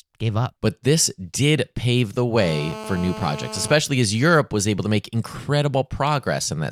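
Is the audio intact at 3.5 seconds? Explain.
No. At 3.5 s a GSM phone buzz is present, running from 2.37 to 3.74 s, just after "this did pave the." A nearby 2G phone on a call pulses at 217 Hz, and the audio circuit rectifies those bursts into a steady, raspy, harmonic-rich buzz about 13 dB below the speech. Mains hum is smoother and sits at 50 or 60 Hz.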